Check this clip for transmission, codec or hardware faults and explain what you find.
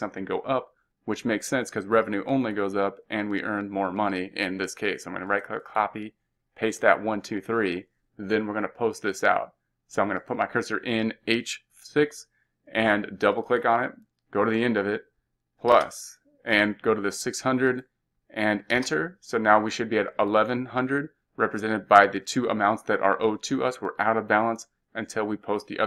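There is one fault, overlapping chunks, heard twice. At 5.7 s and again at 15.72 s, a 20 ms stretch of audio plays twice. Each new 10-second chunk starts before the previous one ends. The doubled joins come across as brief stutters or clicks.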